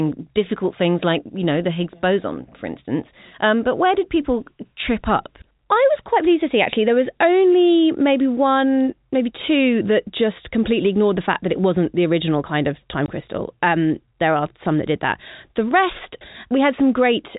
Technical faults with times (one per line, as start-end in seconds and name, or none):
13.06 packet loss filled with silence